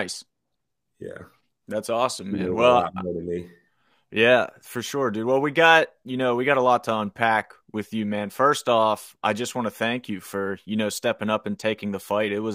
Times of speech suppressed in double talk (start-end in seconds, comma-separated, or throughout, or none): none